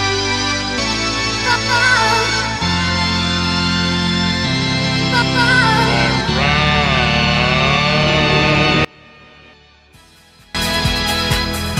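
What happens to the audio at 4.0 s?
Nothing goes wrong at 4.0 s; the audio there plays through intact, with no dropout, click, distortion or other audible fault.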